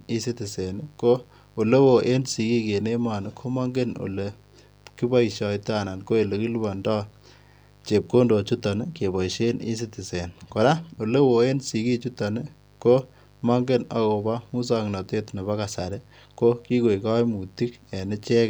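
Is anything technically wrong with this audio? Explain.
Yes. A mains buzz runs through the whole speech clip, from start to finish, sitting about 30 dB below the speech. Switching spikes, from something like a dimmer or rectifier or through a missing shield, fire twice in each 50 Hz cycle, so the interference repeats at 100 Hz and carries harmonics of 50 Hz up into the several-kilohertz range. That spread of upper harmonics is what separates it from plain mains hum, which is a smooth, low tone: this is a steady, raspy buzz.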